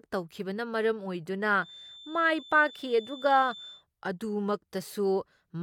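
A feedback whistle runs from 1.55 to 3.85 s, just after "ꯇꯧꯈꯤꯕꯅ ꯃꯔꯝ ꯑꯣꯏꯗꯨꯅ": a thin, wavering 3.5 kHz tone well below the speech, likely a speaker-to-microphone loop held at the edge of feedback.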